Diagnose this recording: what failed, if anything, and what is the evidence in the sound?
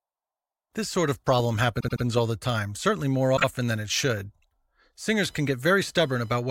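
Compressed frames were written or sent more than once in storage or transmission, so the decoder replays them. From 1.79 to 2.03 s a 78 ms block, which fits three frames, plays three extra times, adding 235 ms of stutter. A 26 ms block at 3.36 to 3.44 s repeats twice, adding 52 ms.

Computer activity noise is entering the analogue wiring through a shared ground: processor or graphics load swings shift the audio circuit's reference. From 5.26 s to the end, a buzzy whine with a pulse rate of roughly 1 kHz sits about 35 dB below the speech, independent of it.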